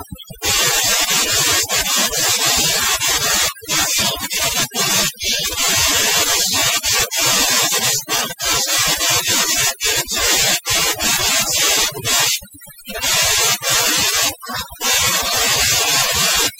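A speech recording with overdone noise removal throughout: gaps fall to near silence broken by twinkling specks. On a spectrogram the background shows as scattered isolated blobs, with quiet voice detail carved away in patches.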